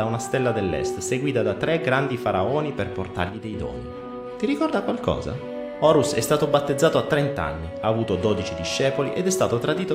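One channel drops out from 3.29 to 3.53 s: for about a quarter of a second the level falls abruptly by about 6 dB and then snaps back just as suddenly. A drop of that size in the combined signal is what you get when a stereo pair is summed to mono and one side carries nothing, so the likely cause is one channel briefly lost, halving the shared content and removing whatever sat only on that side.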